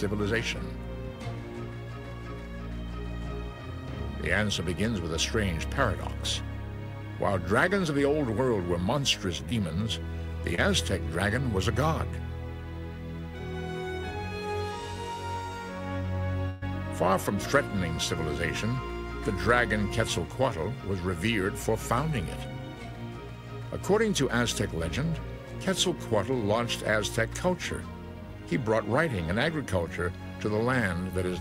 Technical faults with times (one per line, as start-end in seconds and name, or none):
9.49-9.53 short concealed packet loss
10.55-10.60 short concealed packet loss
16.50-16.63 burst of packet loss